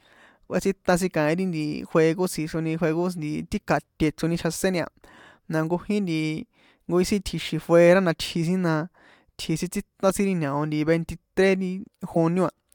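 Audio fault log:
10.10 s and 12.14 to 12.17 s, corrupt frame decoded: two short glitches, with error peaking near -15 dBFS, cut through the speech. In each, a damaged compressed frame was decoded anyway, and misread gains and codes put energy at the wrong frequencies across roughly two frames.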